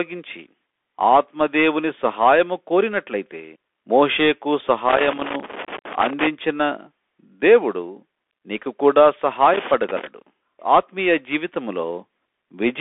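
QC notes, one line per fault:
Throughout: Bluetooth CVSD headset codec. The speech is squeezed into a narrow telephone band, roughly 250 Hz to 3.5 kHz, with nothing above 3.8 kHz. A one-bit delta coder, which fits a 64 kbps link, leaves granular hiss and scratchy s sounds, unlike the smeared swirl of a perceptual codec.
4.89 to 6.27 s and 9.54 to 10.07 s: loose connector crackle. An intermittent contact makes and breaks, chopping the signal into irregular bursts of scratching. It comes in uneven clusters tied to movement, unlike the steady hiss of the codec or a regular dropout pattern.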